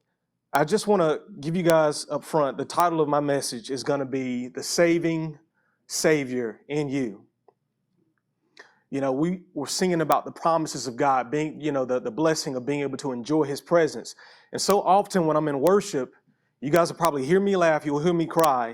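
Integer overflow in this speech clip: loud peaks that only just reach full scale wrap to the opposite sign instead of being limited, so each one flips across the whole range as a violent crack, far sharper than clipping. Cracks land at 0.55 s, before "just want to give", and at 1.70, 2.80, 10.12, 14.70 and 15.67 s, with longer bursts from 16.76 to 17.05 s and from 18.40 to 18.44 s.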